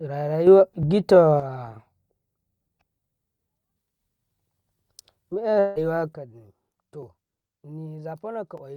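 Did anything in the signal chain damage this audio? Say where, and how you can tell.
Yes, the audio is damaged at three stages.

Sudden gain jump: Right after "rara ra", at 0.47 s, everything steps up by about 6 dB and drops back at 1.40 s. At 6.13 s it falls by about 10 dB and stays down to the end. Speech and background noise move together, so the change came after capture. The likely cause is a digital gain stage applied without a ramp. On the waveform, the envelope steps abruptly at a single sample. On a spectrogram, every band brightens or darkens at once.

Dropped buffer (overrun): Small skips in the speech occur at 0.83, 7.03 and 8.58 s. The jumps are very short, from a few milliseconds to roughly two hundredths of a second. The likely cause is the driver or buffer stage failing to read samples before the hardware overwrote them. On the waveform, the two sides join with a discontinuity and no gap. 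The spectrogram shows a thin vertical broadband line.

Long network dropout: From 5.59 to 5.79 s, about 160 ms of audio never arrived. The receiver filled the entire gap by extending the last sound, so you hear a buzzy, fading tail and no true silence. Speech then resumes further on, and the lost part is gone. The likely cause is packet loss on the network. On a spectrogram, this shows as smeared, repeated harmonics that fade out. The waveform shows a periodic decaying stretch.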